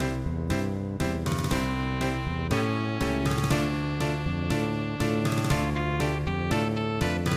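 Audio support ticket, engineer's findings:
No faults found in this audio; nothing to report against any component.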